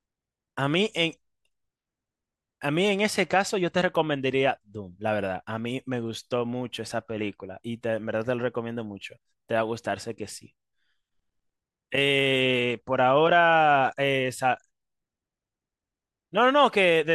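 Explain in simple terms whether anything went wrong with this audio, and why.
Nothing went wrong here; I hear no technical faults.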